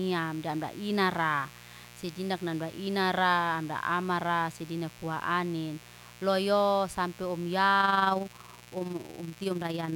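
Mains buzz runs through the whole of this speech recording, a steady raspy tone sitting roughly 20 dB below the voice. Sharp switching spikes from a dimmer, rectifier or poor shielding have entered at twice each 60 Hz cycle, spraying harmonics up into the kilohertz range. Overlap-add ripple takes over from 7.80 s to the end at 9.95 s, giving a rough, fast flutter around 20 times a second with level swings of about 6 dB. Frames were windowed and rejoined with an overlap that fails to sum to constant gain, so loudness pulses once per frame.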